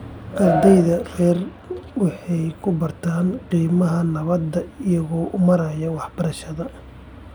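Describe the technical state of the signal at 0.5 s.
At 0.5 s the speech signal is intact, with no audible dropout, distortion or other fault at that moment.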